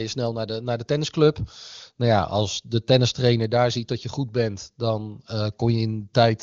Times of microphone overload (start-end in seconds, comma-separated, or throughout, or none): none